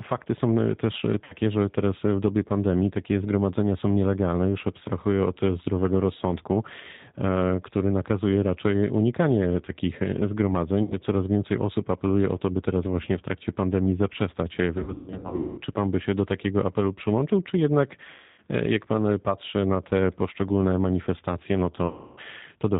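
Throughout, the speech carries plainly audible G.729 codec damage. The 8 kbit/s coder rebuilds speech from a filter and a few pulses, so it sounds rough, synthetic and cut off above 4 kHz.

VoIP packet loss concealed by the speech codec appears five times. The decoder stretches its last pitch and filter into a fading buzzy tone or coloured noise, and the voice stays weak afterwards. At 1.24 s, between "też e" and "że teraz w dobie", about 60 ms is lost. At 10.83 s, 80 ms goes. From 14.78 to 15.61 s, after "w trakcie pandemii zaprzestać", losses totalling 580 ms are scattered over 800 ms, with the longest gap at 220 ms. At 18.10 s, between "apelu przyłączył czy jednak" and "jak pan patrzy na", 280 ms is lost. At 21.87 s, 300 ms drops out.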